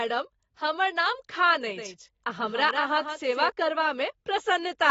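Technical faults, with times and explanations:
Throughout, AAC compression: the speech sounds dull and smeared, with a plainly audible warbling, fizzy texture on sustained sounds and sibilants, and nothing at all above 7.6 kHz. This is likely lossy AAC-LC coding, which quantises each frame's frequency lines against a hearing model. At a low rate it lowers the upper cut-off and starves weaker bands of bits, so the damage fits a bitrate around 24 kbps.
1.77 to 3.49 s, doubled audio track: over this span the speech is heard twice, with a second full-band copy trailing around 150 ms behind and about 5 dB quieter. The copy has no decay or room colour, so it reads as a clean slapback rather than reverb, and it starts and stops abruptly at the ends of the span. The likely cause is the same signal being mixed in a second time through a slower path or a misaligned edit.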